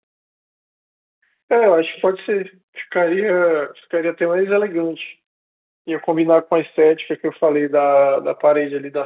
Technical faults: none

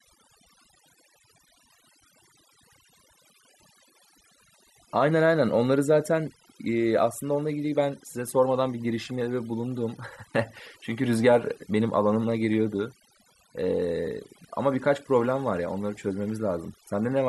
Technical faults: overdone noise removal

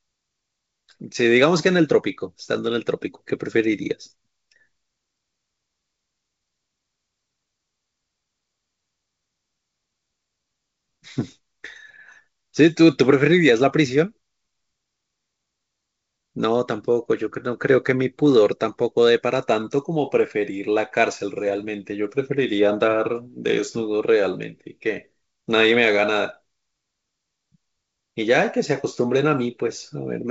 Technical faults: none

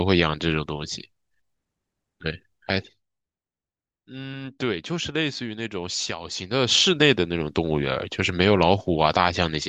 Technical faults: zipper noise

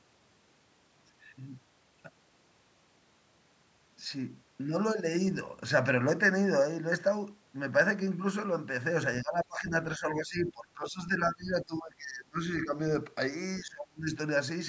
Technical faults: speech suppressed in double talk

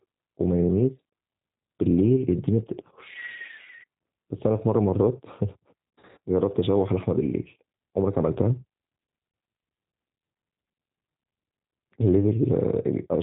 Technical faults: G.729 codec; VoIP packet loss concealed by the speech codec

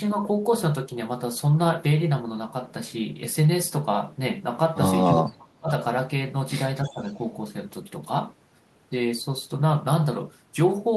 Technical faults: speech suppressed in double talk; echo leak

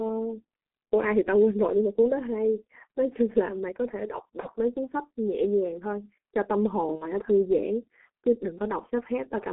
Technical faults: G.723.1 codec; VoIP packet loss concealed by the speech codec

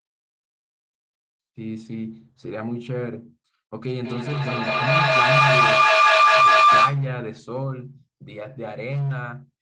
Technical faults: feedback howl

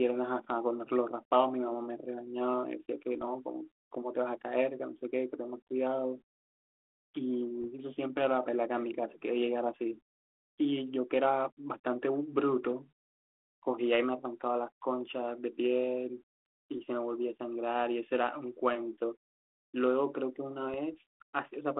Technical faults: bit errors on an ADPCM link

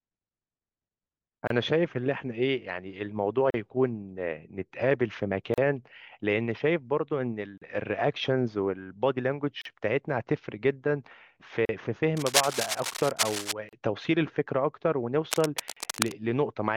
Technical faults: gap at a join of encoded pieces; cable scratch noise

